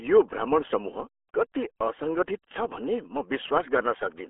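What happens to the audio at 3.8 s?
At 3.8 s you're hearing the same thing that runs through the whole clip: the RealAudio 14.4 codec. It squeezes speech down to what sounds like a dial-up-era 8 kbit/s stream, cutting everything above 3.8 kHz and leaving it muffled, gargly and smeared.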